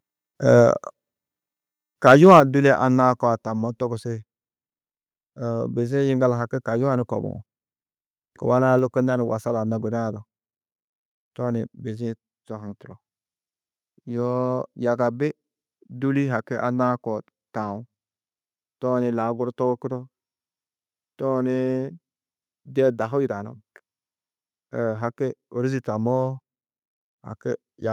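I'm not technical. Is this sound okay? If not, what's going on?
No. From 2.06 to 2.4 s, the microphone's input was likely set too high, causing microphone overload: the loudest moments go past what the recording can hold, so their tops get cut off and the speech turns harsh and crackly.

Right after, at 2.40 s, and again at 3.42 s and 8.79 s, the microphone volume stepped down, likely because the calling software reacted to the loud input by lowering it. Each time, the speech and background suddenly get quieter, the first drop clearly the biggest.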